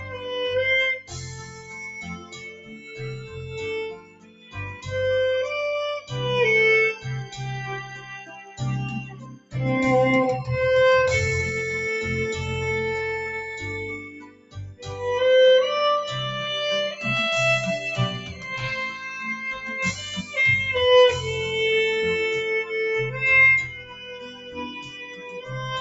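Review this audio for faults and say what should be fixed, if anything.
A noise suppressor applied to music or sounds is active throughout. A speech-oriented suppressor treats sustained, steady material as noise, so the level swings by around 10 dB as it clamps and releases. This is a gain that breathes with the content, not a fixed-level dropout or a limiter's steady squash.

Sound is cut by the noise suppressor at 0.00–0.26 s (about 6 dB), 1.01–4.88 s (about 18 dB), 7.89–8.60 s (about 10 dB), 9.04–9.54 s (about 18 dB), 13.99–15.01 s (about 18 dB), 18.18–18.47 s (about 8 dB), 20.21–20.37 s (about 6 dB) and 23.68–25.55 s (about 10 dB). Held and decaying passages sink while sharp onsets pass, which separates this from packet loss, where everything drops out together.

Turn off noise suppression, or switch the call to a music mode that bypasses it, before sending non-speech audio.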